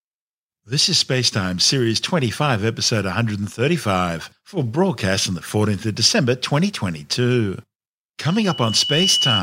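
From 8.25 s to 9.42 s a loudspeaker feedback squeal takes over the end of the speech. A pure tone at 3 kHz appears and swells steadily over about 0.7 s before settling at a level about 5 dB above the speech. The microphone is picking up the loudspeaker it feeds, and at 3 kHz the gain around that loop exceeds unity. Each pass reinforces the tone, so it keeps growing until the amplifier caps it, and it is still present when the audio ends.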